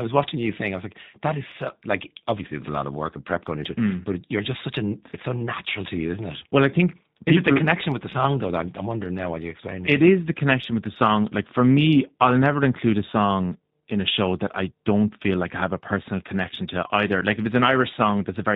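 The clip is speech passed through the G.729 codec from start to finish, and the damage is plainly audible. Everything is rebuilt from a vocal tract filter, a pitch predictor and a few pulses per 10 ms frame, which sounds consistent with an 8 kbit/s G.729A link and gives the voice a rough, slightly synthetic edge. On a spectrogram the energy stops flat at 4 kHz, and the waveform looks smoothed.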